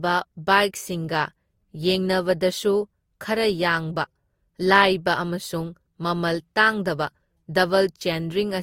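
Speech carries transcoding between lossy codecs for its whole length. Nothing survives above 16.6 kHz, and two distinct artefact textures sit on top of each other. That fits a low-rate Opus encode, likely re-encoded through Vorbis near 62 kbit/s. A single compression pass would leave only one kind of smearing.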